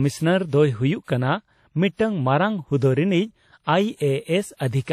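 Across the whole speech clip, nothing is heard above 13.8 kHz. Two different kinds of coding artefact sit together in the sound. This points to transcoding between lossy codecs, likely a WMA encode followed by AAC-LC. The second codec re-encoded the first one's damage and added its own.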